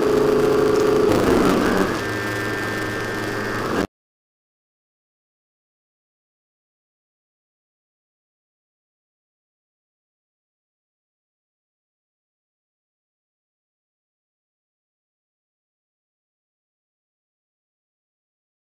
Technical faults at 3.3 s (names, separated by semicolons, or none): buffer tearing